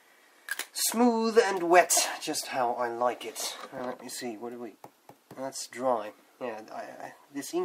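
Around 3.78 to 3.80 s there's a short patch of lost LE Audio frames. About 20 ms went missing, which fits two 10 ms LC3 frames, and the decoder patched the hole by reusing the last spectrum with random signs, so the sound smears briefly into noise.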